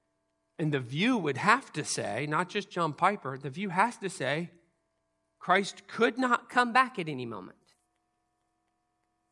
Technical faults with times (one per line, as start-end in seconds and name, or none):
6.50-9.32 wrong sample rate